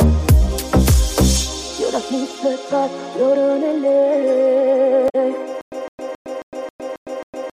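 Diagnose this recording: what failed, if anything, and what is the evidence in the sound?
At the codec stage, damaged data in a compressed stream produces a brief glitch from 5.06 to 5.15 s. Corrupted frames threw the decoder out of sync until it found the next valid frame header. It is a single garbled blip, not a regular repeat.

From 5.61 s to the end, a stutter with silent gaps takes over. A 160 ms fragment plays seven times, each followed by 109 ms of digital silence, giving a 270 ms cycle. The likely cause is a playback or stream stall, with each retry replaying the last buffer before running empty. Identical repeats separated by true silence distinguish it from corruption.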